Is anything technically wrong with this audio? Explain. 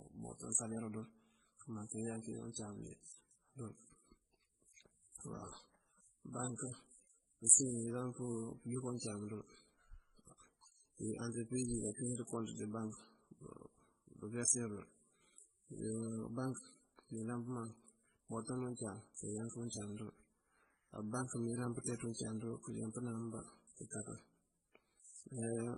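Yes. Throughout the speech, transcoding between lossy codecs, likely a low-rate MP3 re-encoded as HE-AAC, layers both codecs' artefacts together and leaves nothing above 11.3 kHz.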